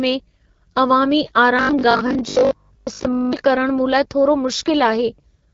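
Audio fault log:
Throughout, AMR wideband (HD Voice) codec: the speech has a plainly rough, raspy edge, the kind you get when AMR-WB runs at one of its low rates, and this fits about 8.85 kbit/s, where the pulse model can't keep the detail and the top band is just shaped noise.
1.57 to 3.41 s, robotic sound from repeated short buffers: the speech turns into a stiff metallic buzz at 50 Hz that still loosely tracks the words. Most of that stretch, roughly two thirds or more, is likely a 20 ms chunk being replayed while new audio arrives late.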